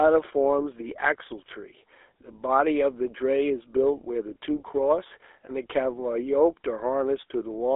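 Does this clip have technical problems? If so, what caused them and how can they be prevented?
Yes. GSM full-rate codec damage runs throughout: a buzzy, gravelly roughness from pulse-excited vocal-tract coding, fitting a 13 kbps GSM link, squeezed into a 300 Hz to 3.6 kHz phone band. To avoid it, record locally or over a wideband connection rather than through a GSM call.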